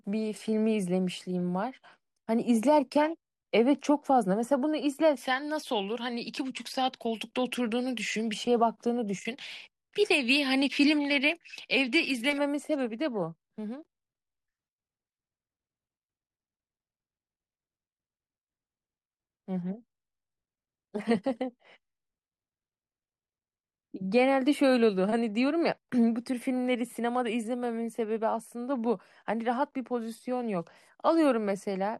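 Nothing in this speech recording stands out as a technical problem; it's a straightforward listen with no faults to point to at any moment.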